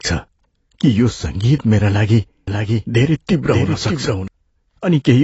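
Speech, with codec damage throughout that is plainly audible. Nothing sounds above about 7.9 kHz. The sound is dull and smeared. The likely cause is AAC compression, AAC-LC at a low bitrate, which fits about 24 kbps. The encoder dropped the top band to save data. From 2.48 to 4.28 s there is a doubled audio track. A second full-band copy runs about half a second behind, roughly 5 dB quieter. It has no decay or room colour. It starts and stops abruptly. It likely comes from a slower second capture path or an edit holding two copies out of step.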